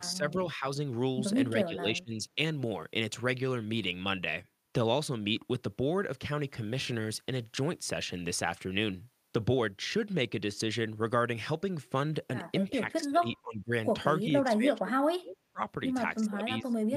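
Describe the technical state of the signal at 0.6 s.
At 0.6 s the speech is caught in a brief dip from 0.56 to 0.64 s. The level sinks by roughly 5 dB for about 70 ms, then recovers. This sounds like speech suppressed in double talk. The likely cause is an echo canceller meeting both sides talking at once. Unable to tell this talker apart from its own loudspeaker echo, it turned the whole signal down. Here the result is a short, shallow duck.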